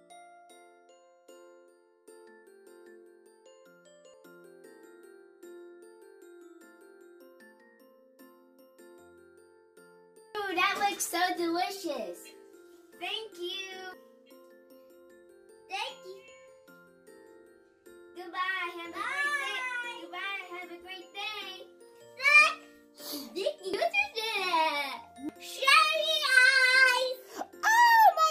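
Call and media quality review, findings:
Skips at 4.14, 13.94 and 23.74 s, about 10 s apart, each losing roughly a fifth of a second, butt-joined. Likely audio missing between chunks at the recorder's chunk handover.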